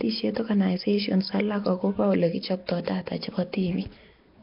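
Throughout the speech, a rough, hissy halo and smeared, underwater quality, likely from heavy Nellymoser compression near 22 kbps: starved bands are filled with noise. A spectrogram shows grainy, blocky texture beneath a hard ceiling at 5.3 kHz.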